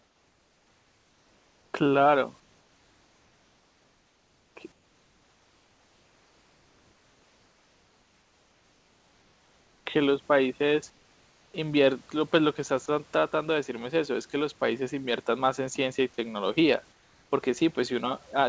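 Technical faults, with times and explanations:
0.00–1.74, 2.40–4.56, 4.72–9.86, 10.90–11.54 and 16.92–17.32 s: comfort noise in place of the background. In each pause the room noise, about 36 to 39 dB below the loud parts, becomes a smooth, detail-free hiss about 4 dB quieter. This is likely discontinuous transmission with synthetic fill. Unlike a dropout, only the background is replaced, and no speech goes missing.
12.86–12.88 s: sound dropped by the voice detector. A 20 ms sliver of speech is swapped for the same steady synthetic noise before the speech resumes. The detector likely misjudged a quiet moment as background. Unlike the pauses above, actual speech is lost here; the speech is band-limited to nothing above 8 kHz by the G.722 call path.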